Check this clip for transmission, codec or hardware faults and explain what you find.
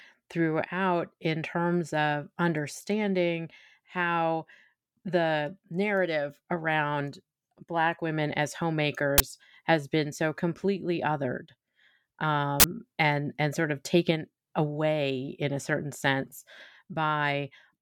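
Two brief faults of the same kind interrupt the speech. An uninitialised buffer, played before any audio was written to it, sends leftover memory out as samples. This produces a 20 ms burst of digital noise at 9.18 to 9.20 s and a 40 ms burst at 12.60 to 12.64 s.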